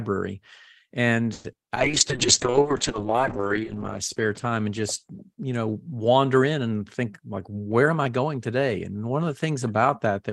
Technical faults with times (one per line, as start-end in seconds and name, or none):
1.33-1.71 repeated packet loss (robotic sound)
1.76-6.29 call bitrate drop
1.88-2.64 jitter buffer slow-down
7.03-8.24 jitter buffer speed-up